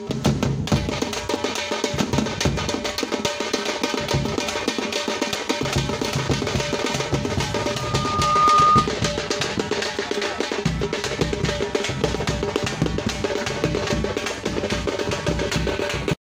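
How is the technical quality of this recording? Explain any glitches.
There's one real problem, a loudspeaker feedback squeal from about 7.56 to 8.91 s. A mic was hearing its own speaker, and at 1.2 kHz the loop gain went past one, so a pure tone swelled over roughly a second until it sat about 10 dB above the rest of the sound before cutting off.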